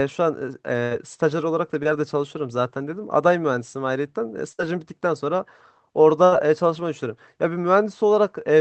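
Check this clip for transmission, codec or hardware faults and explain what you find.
Packet loss on the call link causes four audible faults, three long and one short. The audio comes through an Opus call path with its usual coding noise and nothing above about 8 kHz.

Burst of packet loss, at 0.83–0.93 s, 4.53–4.61 s and 6.25–6.34 s: several consecutive packets failed to arrive in time. The receiver extended the last sound it had for about 75 ms, 56 ms and 72 ms respectively, fading it as it went. That produces a held buzz or dying hiss, after which the speech jumps ahead, with roughly 80, 60 and 80 ms of the original lost.

Short concealed packet loss, at 1.83–1.87 s: a gap of about 20 ms never reached the decoder. The receiver patched it with about 21 ms of synthesized continuation, modelled on the preceding pitch or noise, then crossfaded back into the real signal. This is heard as a brief smear or wobble rather than an obvious dropout, though a short consonant there may be swallowed.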